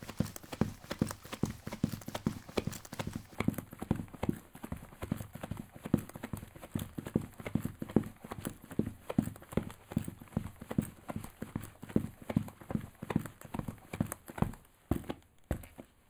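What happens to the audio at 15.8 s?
One channel lags the other by roughly four samples, about a tenth of a millisecond, and the mono sum gives channel delay comb filtering from 3.35 s to the end. Shared content cancels in evenly spaced notches from around 5 kHz, so the sound is hollow and phasey.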